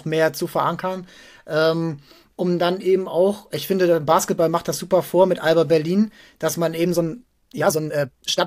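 From 6.83 s to the end at 8.47 s, the speech has a time-stretched section, running about 1.81 times faster while pitch holds steady. This was likely caused by software squeezing the audio by dropping short pieces, so delivery turns abruptly rushed.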